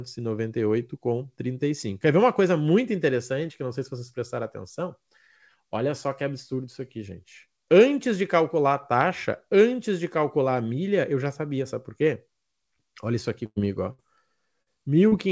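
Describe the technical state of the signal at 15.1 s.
At 15.1 s there is a short concealed packet loss, from 15.08 to 15.14 s. About 40 ms of speech never reached the decoder in time. The receiver extended the preceding sound for 35 ms and blended back, leaving a brief smear.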